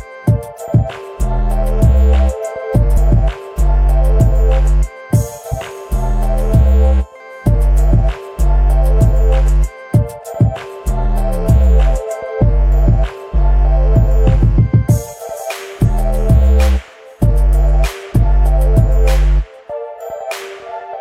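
Three short bursts of damaged data in a compressed stream interrupt the audio, at 2.93 to 2.98 s, 5.48 to 5.54 s and 15.84 to 15.90 s, each lasting roughly 55 ms. Each is heard as a brief blip, a chirp, squawk, click or short hole. At these points the encoded bytes were corrupted, so the decoder could not interpret the affected frames correctly and had to resynchronise on a following frame before normal playback resumed.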